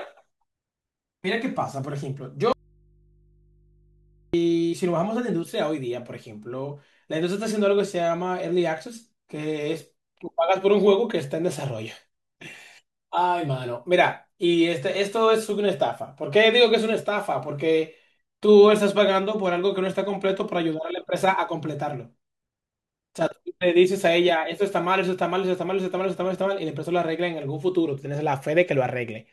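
At 2.53 s there's an audio dropout to a faint residue: the speech cuts out abruptly for about 1.8 s, leaving just low hum, likely from an open input, until 4.34 s.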